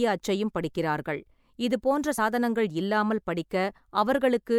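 At 2.17 s the speech jumps forward by roughly one compressed frame, losing about 20 ms of audio. This is a case of compressed frames skipped: the frame was missing or rejected by the decoder as damaged, so playback resumes from the next one. The jump length fits a codec frame of about 24 ms. On a waveform the envelope shifts abruptly with no gap. A spectrogram shows harmonics slightly misaligned across a thin vertical seam.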